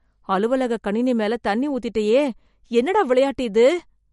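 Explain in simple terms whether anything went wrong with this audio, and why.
The speech sounds plainly watery and swirly from start to finish, with the top end dulled and nothing above about 11.2 kHz. This is likely MP3 compression: short of data, the encoder cut the treble and let faint detail flicker in and out.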